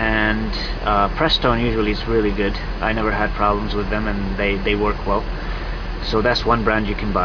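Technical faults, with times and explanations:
No technical fault can be heard anywhere in the clip. Nothing interrupts or alters the sound at any point, so there are no times to list.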